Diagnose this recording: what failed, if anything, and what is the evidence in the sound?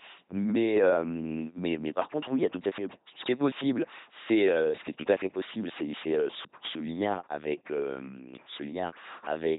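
The failure is at the codec stage: the speech has passed through an LPC-10 vocoder. For the whole clip the speech is a buzzing, mechanical robot voice with no content above about 3.9 kHz, which fits a narrowband 2.4 kbit/s channel. The damage is heavy. Instead of carrying the waveform, the coder sends only a short all-pole vocal tract filter and a hard voiced-or-unvoiced choice, resynthesising each moment from a pulse train or noise.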